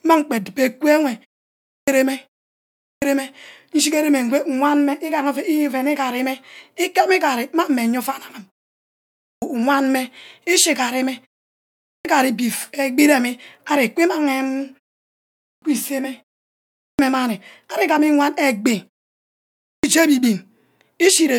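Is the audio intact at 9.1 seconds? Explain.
No, a clipped start after a pause runs from 9.03 to 9.42 s. After about 0.6 s of silence the output device has dropped into an idle state and needs time to wake, so roughly 390 ms of speech is swallowed and the sound begins abruptly, missing its opening.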